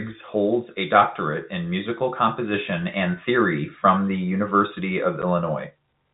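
No technical faults are audible.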